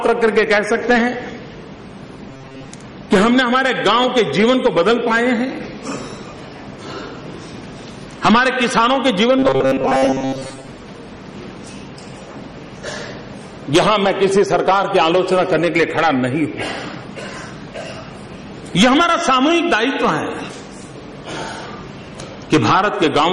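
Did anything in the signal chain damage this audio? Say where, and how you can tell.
Yes. Robotic sound from repeated short buffers, 2.30–2.70 s and 9.39–10.67 s. A rigid 133 Hz buzz. Likely a starved buffer looping 7.5 ms chunks.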